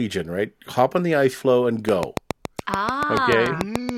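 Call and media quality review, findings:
Train of clicks, 1.89 to 3.90 s, starting just after "the ice floe and". Likely interference from nearby equipment or a struggling interface injecting a pulse at a steady 7 per second. Result: around fifteen near-identical clicks, well above the speech level, ticking through speech and pauses alike.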